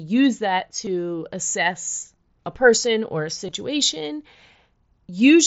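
At 0.85 s, again at 2.00 to 2.02 s just before "a person or a", and over 3.47 to 3.55 s right after "a person or a", concealed Bluetooth headset packet loss fills short holes of about 15, 22.5 and 37.5 ms. The last is scattered, with no run longer than 15 ms. The phone patched each hole by repeating a matching stretch of recent waveform, so the sound continues without the silence a plain dropout would leave. The wideband mSBC link around them passes speech up to 8 kHz.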